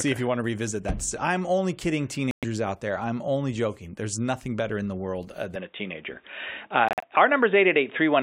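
At 2.31 to 2.45 s and again at 6.89 to 7.05 s, a corrupt frame was muted: the decoder rejected damaged compressed frames and the player substituted silence, leaving abrupt gaps of 0.13 s and 0.16 s. From 5.56 s the input switched to a poorer device, likely another microphone or a headset profile, so the sound turns dull with nothing above 3.8 kHz, shifts level by a few decibels, and gains a faint new noise floor, with no gap at the changeover.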